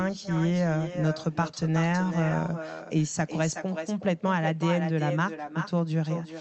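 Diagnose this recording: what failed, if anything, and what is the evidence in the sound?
Echo with no canceller, a call-processing failure. Throughout the clip, the speech is shadowed by a thinner copy about 10 dB down, arriving roughly 0.4 s later. The far end's loudspeaker is leaking into its microphone, and nothing on that side is cancelling it.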